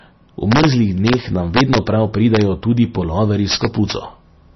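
From start to end, the speech sounds watery and swirly. Nothing reaches above 6 kHz. Sibilants chirp metallically and attacks smear. This is likely heavy MP3 compression, and the damage fits a bitrate around 24 kbps.

Integer overflow strikes four times: 0.52 to 1.14 s, 1.57 to 1.78 s, 2.35 to 2.41 s just before "tudi puloverji", and 3.50 to 3.92 s just after it. Peaks went about 1 to 6 dB past the integer limit. They wrapped to the opposite sign, giving violent cracks far harsher than clipping. The last is worst.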